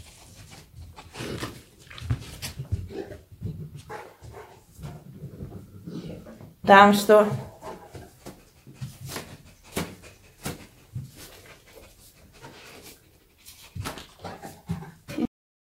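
At 15.25 s the audio has a cut-off end: the final buffers were never written, so the sound stops mid-event and drops straight to digital silence for the last 0.45 s. Unlike a fade-out or natural ending, there is no decay or tail at all.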